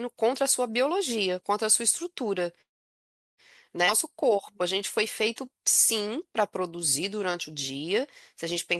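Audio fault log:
2.61–3.40 s, call audio freeze: The sound halts and a gap of about 0.77 s is put in, almost all of it silent (about 0.73 s) after a brief trailing continuation of the last sound. Playback then resumes exactly where it stopped, with nothing lost. That is what separates it from a dropout or a skip: the content stays whole and only the timing is pushed back. The likely cause is delayed packets draining the jitter buffer until late audio arrived.
3.86–3.89 s, skip ahead: Playback jumps forward with barely any gap, only about 12 ms of filler, and roughly 0.3 s of audio is missing, so the two sides are joined almost directly. Unlike the freeze just before it, which added time and lost nothing, this removes material and shortens the timeline. It fits the buffer discarding the backlog that built up during the stall so the call catches up.
4.12–4.79 s and 5.41–8.79 s, jitter buffer slow-down: The audio runs slower at unchanged pitch, at about 93% speed in the first stretch (about 55 ms added) and about 94% in the second (about 217 ms added). 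Sounds are drawn out because single pitch periods and fragments of pauses are repeated to rebuild a reserve. Unlike a freeze, nothing stops and no gap appears. The timing just stretches, sometimes with a slight warble.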